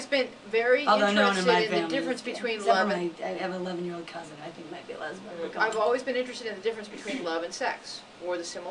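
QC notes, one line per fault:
No faults found in this clip.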